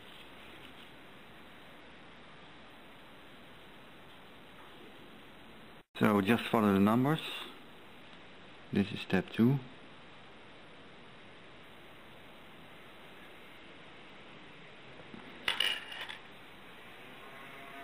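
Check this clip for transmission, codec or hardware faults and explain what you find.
Three passes of dulled, gritty treble, from 1.79 to 2.70 s, 8.02 to 11.63 s and 13.57 to 16.32 s, point to a Bluetooth SBC bit pool drop. The link starved the encoder of bits, which fits the bit pool falling from 31 to 12, near 88 kbps. The top sub-bands lost their share and the rest were coarsely quantised.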